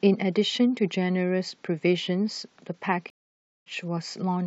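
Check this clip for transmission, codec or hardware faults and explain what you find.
There's one fault here, a stream reconnect near the end. At 3.1 s the speech drops out completely for about 560 ms, coming back at 3.67 s. What happened is the connection broke, the player sat silent while it reconnected, then started a fresh decoder mid-stream. Because of that, the speech doesn't pick up where it left off. It resumes roughly a tenth of a second further along, so a small slice is simply missing after the gap.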